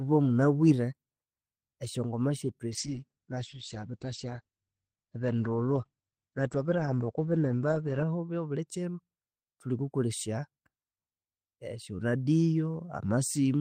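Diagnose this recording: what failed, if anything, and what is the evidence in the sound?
Call bitrate drop, 2.73 to 8.73 s: a network-driven codec fall from 32 to 10 kbps narrows the speech from 20 kHz to 8 kHz, sounding coarse and muffled.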